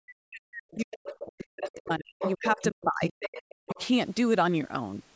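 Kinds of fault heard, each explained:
Speech suppressed in double talk: The talker's voice gets pushed right down, at its deepest by something like 40 dB, across the first two seconds or so and again for about a second between 2.36 and 3.77 s. That pattern is most likely the echo canceller hearing both sides at once, failing to tell the local talker from the loudspeaker echo, and ducking everything.
Other side's voice leaking through: A second, fainter voice slips into the microphone path in short scraps at 0.71–1.15, 1.67–1.8, 2.19–2.64, 3.01–3.13 and 3.33–3.86 s. It's well under the talker in the first bursts but close to their level around 2.2 s and 3.0 s. This is likely loudspeaker playback of the far end that the echo canceller didn't fully remove, which is why it arrives in intermittent bursts.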